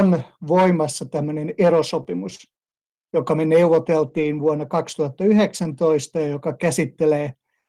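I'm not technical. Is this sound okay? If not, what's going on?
No. There are two kinds of small glitch, both from sound going missing on its way across the connection.

The first is a short concealed packet loss, from 2.03 to 2.07 s. About a fiftieth of a second of speech never arrived. The receiving end guessed it by stretching the sound just before, so it comes out as a quick smear or wobble.

The second is a lost packet rebuilt from error correction, at 4.07 to 4.25 s and again at 5.63 to 5.65 s. Pieces went missing, but a rough backup copy travelled with the next piece. Nothing drops out. Those moments just sound grainier and noisier.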